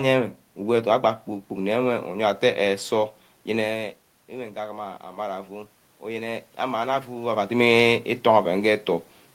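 From 4.55 s to 7.38 s, the automatic gain rises. The speech input had fallen by about 12 dB, as the talker moved back from the microphone around 3.5 s. The gain control slowly adds about 4 dB. Voice and room noise swell together.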